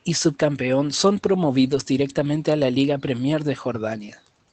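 Lost packet rebuilt from error correction, 1.63 to 1.81 s, between "y subcampeón son" and "directamente a la". The stretch plays without any gap but turns rougher and noisier. That fits about 100 ms of audio, roughly five 20 ms packets, replayed from the low-bitrate Opus copies that the following packets carried. Because the call was already limited to an 8 kHz band, the rebuilt frames show added grain rather than any drop in the highest frequencies.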